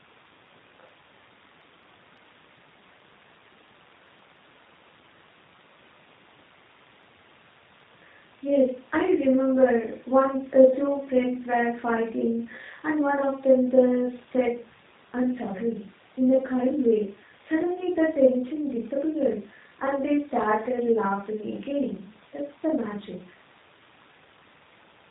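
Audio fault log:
throughout: G.729 codec. The speech is plainly rough and slightly synthetic, with nothing above 4 kHz. That fits a G.729A coder at 8 kbit/s, which rebuilds each 10 ms frame from a vocal tract filter, a pitch predictor and a few pulses.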